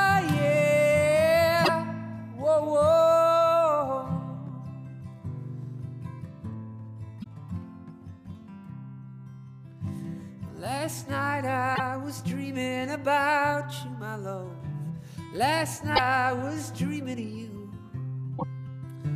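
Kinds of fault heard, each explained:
Damaged data in a compressed stream: corrupted frames knock the decoder out of sync, giving five short blips, each under a tenth of a second.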